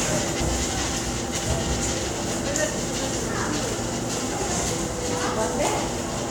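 Three brief glitches cut into this recording of sounds, at about 0.40 s, 2.77 s and 6.13 s, each lasting under 20 ms. They are the signature of damaged data in a compressed stream: part of the encoded data was lost or overwritten, so the decoder misread the frames there and lost sync while it hunted for the next valid frame header, turning those few milliseconds into a glitch.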